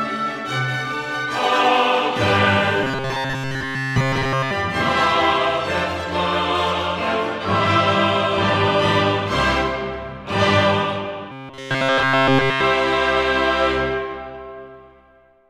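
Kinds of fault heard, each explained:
Robotic sound from repeated short buffers: from 2.84 to 4.51 s and again from 11.32 to 12.61 s, the sound turns into a rigid, metallic buzz fixed at 134 Hz. This is likely caused by new audio arriving too seldom, so playback loops the last fragment, about 7.5 ms long, to fill the gap while the real material is skipped. Virtually the whole of each stretch is repeated.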